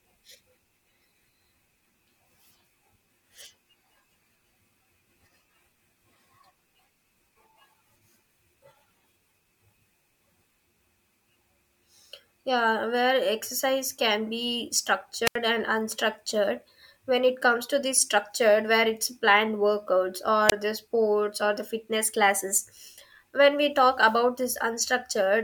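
The radio link from an analogue FM microphone weakened enough for the receiver's squelch to mute it, twice. At 15.25 to 15.36 s, after "can be", a wireless microphone squelch dropout leaves about 79 ms of near silence before "and unstructured"; at 20.48 to 20.52 s a shorter hole of about 23 ms precedes "the sports or the".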